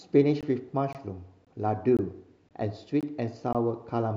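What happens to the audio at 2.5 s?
From 2.49 to 2.51 s a gap between chunks cuts in: a 20 ms hard-edged hole at a 0.5 s join, with the speech delayed rather than lost, unlike a dropout.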